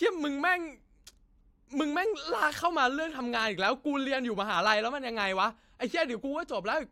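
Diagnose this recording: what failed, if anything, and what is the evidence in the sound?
Nothing failed: the recording carries no audible evidence of a fault at any stage.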